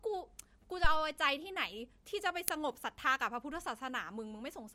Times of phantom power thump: 0.84-1.06

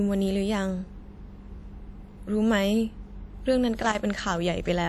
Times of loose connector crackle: 3.80-3.95

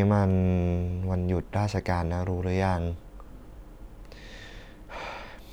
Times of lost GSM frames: none

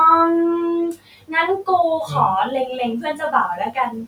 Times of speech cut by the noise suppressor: 0.93-1.33, 3.01-3.92

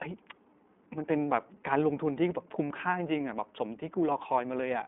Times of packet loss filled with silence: none

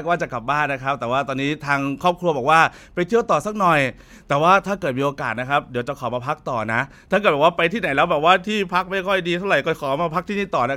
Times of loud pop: none

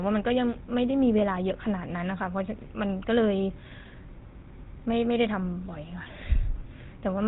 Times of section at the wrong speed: none

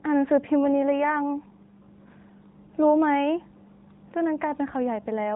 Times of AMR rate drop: 0.65-1.85

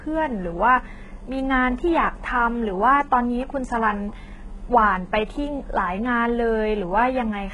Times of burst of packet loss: none

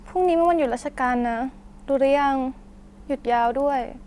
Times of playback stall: none

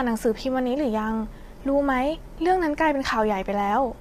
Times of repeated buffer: none

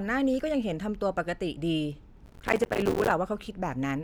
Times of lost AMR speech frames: none

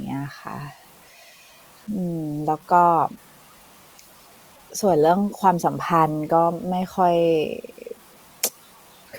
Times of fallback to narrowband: none

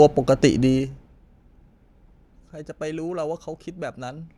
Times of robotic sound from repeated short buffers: none

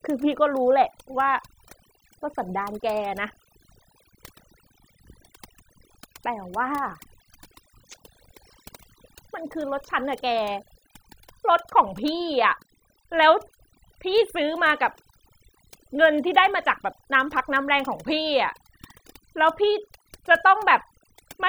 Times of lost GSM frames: none

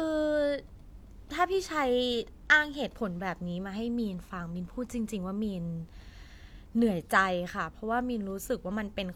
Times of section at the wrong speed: none

